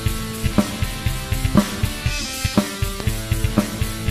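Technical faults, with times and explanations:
1.55–1.58 s and 3.00–3.03 s, loud pop: each is a single sharp pop lasting about 24 ms and peaking roughly 15 dB above the surrounding sound, which carries on underneath. The likely cause is a sudden voltage step or pulse from a plug, switch, static discharge or driver glitch entering the signal path. On a waveform each shows as a brief spike standing well clear of the envelope; on a spectrogram, as a thin vertical stripe spanning the spectrum.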